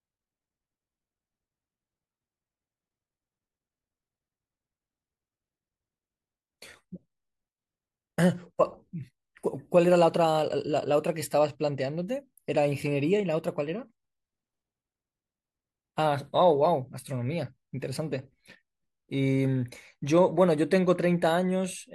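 No technical faults can be heard anywhere in the speech recording, and the signal stays steady and intact throughout.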